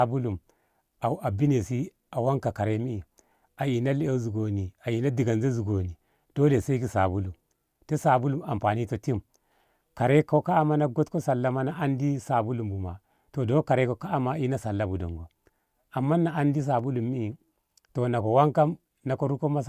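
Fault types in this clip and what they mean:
No technical faults are audible anywhere in the speech recording.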